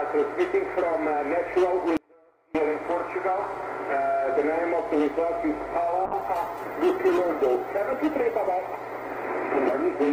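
From 1.97 to 2.55 s the sound abruptly drops to a faint trace roughly 30 dB down, likely an audio dropout to a faint residue lasting about 0.58 s.

From 6.06 s to the end the sound turns rough and muffled, consistent with a call bitrate drop from around 128 kbps to about 19 kbps, bottoming out for 2.73 s.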